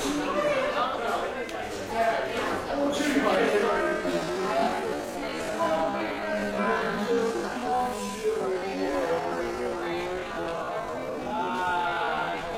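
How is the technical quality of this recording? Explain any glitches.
The recording has one clear fault. A time-stretched section runs from 3.33 s to the end at 12.57 s, where the audio suddenly plays at half speed with unchanged pitch. This is likely software that held pitch by repeating short pieces, which makes the slowed sound drag.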